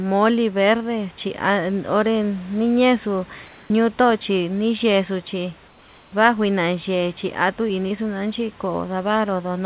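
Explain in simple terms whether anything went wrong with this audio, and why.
Twice the room's background is replaced by comfort noise: from 3.46 to 3.7 s, and from 5.68 to 6.12 s, where it also turns a little quieter. In those gaps the natural background becomes a flat, even hiss, likely because the call stopped sending sound during the pause and the receiver filled in synthetic noise. Unlike a dropout, the gap never goes fully silent, and the hiss carries none of the room's detail.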